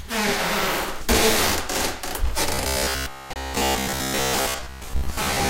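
From 2.54 s to the end at 5.49 s, robotic sound from repeated short buffers sets in, likely from audio arriving too seldom. A fixed 66.7 Hz buzz fits a 15 ms fragment being replayed in place of most of the real sound. Unlike a plain dropout, it grinds metallically.

At 3.33 to 3.36 s, a gap between stream segments cuts in a hard-edged 26 ms hole of silence. It differs from a dropout because no sound is lost, only time is added.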